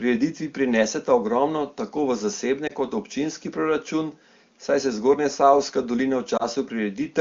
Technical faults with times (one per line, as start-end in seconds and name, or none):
2.67-2.72 lost AMR speech frames
6.37-6.43 lost AMR speech frames